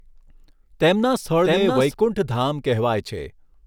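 Speech with a doubled audio track, likely from a second, slower capture path: a copy about 5 dB quieter trails by roughly 0.7 s, already present at the start and cutting off abruptly at 1.94 s.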